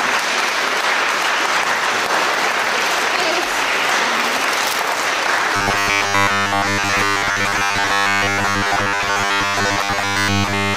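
From 5.56 s to the end, robotic sound from repeated short buffers takes over. A rigid 100 Hz buzz replaces most of the audio, likely from one 10 ms chunk replayed over and over.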